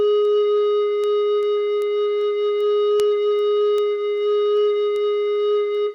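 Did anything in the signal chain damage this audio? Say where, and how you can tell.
Yes. Word clock ticks run through this music from 0.25 s to 5.75 s, about fifteen of them at a steady spacing of roughly 0.4 s, sharp but uneven in strength. The damage lies in the digital interconnect: the receiving device runs on its own clock, off from the sender's by about 50 ppm, so each time the two clocks slip a single sample is dropped or repeated. The regular spacing separates this from random clicks caused by dropouts or buffer underruns.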